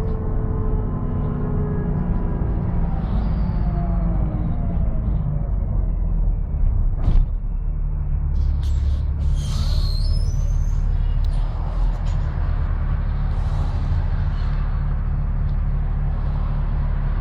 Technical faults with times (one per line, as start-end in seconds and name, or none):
11.25 electrical switching spike